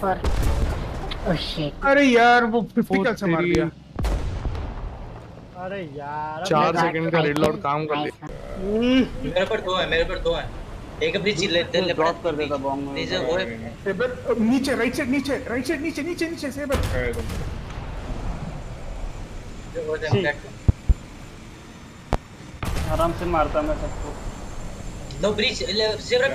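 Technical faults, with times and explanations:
3.55–3.58 s, 7.37–7.48 s, 20.69–20.93 s, 22.13–22.16 s: loud pop, single at the first and last, doubled at the middle two, peaking about 20 dB above the sound, which continues underneath. The likely cause is a sudden voltage pulse from a switch, plug, static or driver glitch.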